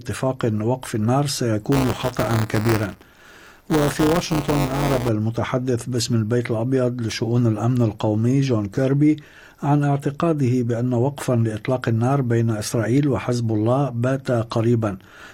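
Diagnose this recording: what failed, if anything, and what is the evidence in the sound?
The driver or buffer stage is at fault. From 1.72 s to 5.09 s there's buffer tearing, a steady robotic buzz at about 188 Hz riding on the sound, present only while there's signal. The writer and the hardware reader have drifted so they cross inside each period, leaving a small slice of every buffer holding audio roughly a hundredth of a second old, with hard joins on both sides. The buzz rate fits a 256-sample buffer.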